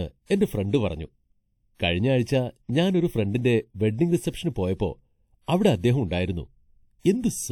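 Throughout this speech clip the sound is hollow and phasey, with fixed notches starting at roughly 1.5 kHz and repeating evenly upward. This is channel delay (comb filtering): one channel lags by about 0.4 ms, and summing to mono cancels the shared content at those spaced frequencies.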